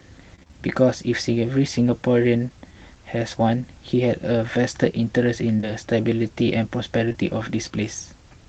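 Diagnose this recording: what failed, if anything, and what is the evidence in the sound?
Network stage, repeated packet loss (robotic sound): from 0.35 to 0.55 s, five dropouts, the longest 27 ms, leave about half that stretch concealed. Each hole is filled by extending the previous sound, so the audio turns choppy with pieces missing. The waveform shows repeated copied cycles; the spectrogram shows frozen, striped harmonics.

Network stage, short concealed packet loss: two pairs of back-to-back 20 ms holes, at 5.57 to 5.65 s and 7.09 to 7.16 s, were patched from the preceding sound and blended back in. Each pair is a brief smear. On the spectrogram, the patched audio smears for about 40 ms, below the Opus codec's 8 kHz ceiling.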